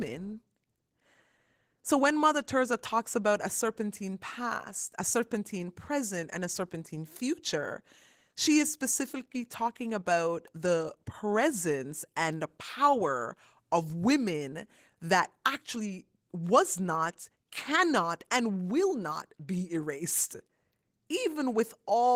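Opus voice compression runs through the whole speech clip, and the damage is plainly audible. The encoder is working in hybrid mode, with a linear-prediction layer for the lower band and a transform layer above 8 kHz. It is starved of bits, which fits a rate around 16 kbps. The excitation is coded coarsely, so the speech comes out hoarse and slightly robotic from start to finish, even though the band still reaches full width.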